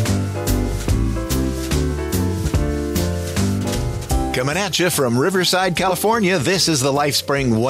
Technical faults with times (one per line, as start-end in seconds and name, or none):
3.74-3.77 compressed frames skipped
5.88-5.92 compressed frames skipped